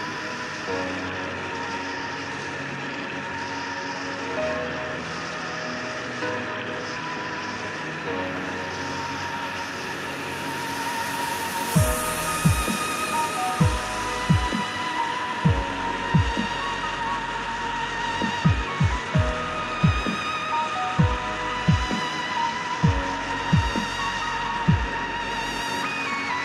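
No technical faults can be heard anywhere in the signal.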